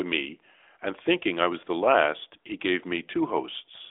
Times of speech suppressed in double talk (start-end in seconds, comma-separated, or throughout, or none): none